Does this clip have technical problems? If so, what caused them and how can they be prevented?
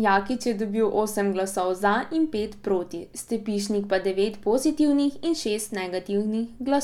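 No, there are no technical faults to hear in this speech recording. With nothing going wrong, there is nothing here that needs preventing.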